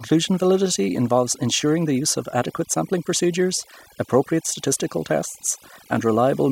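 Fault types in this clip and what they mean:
overdone noise removal: Noise reduction was applied far too strongly across the whole speech clip. Frequency bands close to the estimated noise floor are pulled down hard or shut off. Softer speech detail goes with them. Pauses fall to near silence with twinkling specks.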